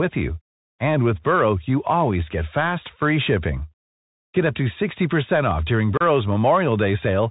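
Bluetooth CVSD headset codec, throughout: each sample is coded as one up-or-down bit with an adapting step size, which fits a 64 kbps CVSD link. Nothing above 4 kHz gets through, s sounds turn scratchy, loud bright moments distort as the step falls behind, and a granular hiss sits underneath.

Unconcealed Bluetooth headset packet loss, 5.97 to 6.01 s: about four voice packets between headset and phone went missing, and silence or an idle pattern took their place. The result is a 30 ms hole with abrupt edges, after which the speech comes back briefly quieter, as CVSD does after a dropout.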